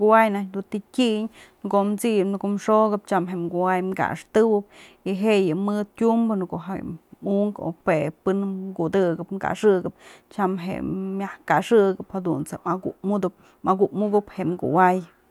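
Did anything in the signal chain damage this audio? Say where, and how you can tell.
No, nothing in the chain seems to have hurt this speech recording; there's nothing to point to at any stage, so there's nothing here to diagnose.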